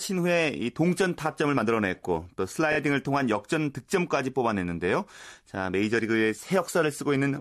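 At 2.72 to 2.77 s the speech stutters with repeated frames: one 26.1 ms block, consistent with a single compressed frame, plays two extra times, adding 52.2 ms. It sounds like a brief stutter. A spectrogram shows the same slice copied side by side.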